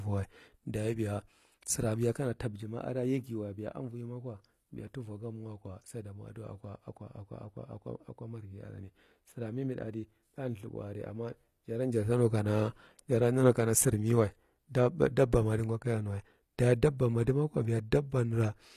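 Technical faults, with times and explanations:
Throughout, HE-AAC compression: the treble reaches high, yet s sounds come out gritty and metallic, and nothing is present above 15 kHz. The likely cause is spectral band replication, where the upper band is copied up from lower frequencies and shaped only coarsely, so its harmonics fail to line up with those below. The damage is plainly audible and fits a bitrate of about 24 kbps. Unlike plain low-bitrate coding, the top is synthesized rather than muffled or swirling.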